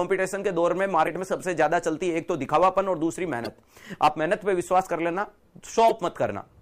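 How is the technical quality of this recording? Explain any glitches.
Three brief glitches break into the recording; all come from damaged data in a compressed stream. They occur at 1.03–1.08 s, 3.44–3.48 s and 5.89–5.91 s. Corrupted bytes make the decoder misread those frames and lose sync until the next valid header, so each is heard as a short chirp, squawk, click or hole cutting through the sound.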